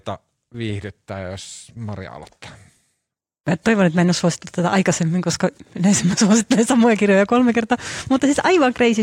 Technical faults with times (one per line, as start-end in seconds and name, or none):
none